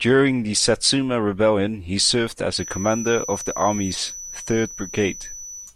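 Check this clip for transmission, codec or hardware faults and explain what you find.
One fault is present in the speech: a feedback whistle from 2.47 s to the end. A thin, steady 5.9 kHz tone sits about 15 dB below the speech, swelling and fading slowly, likely from a loudspeaker-to-microphone loop held just at the edge of oscillation.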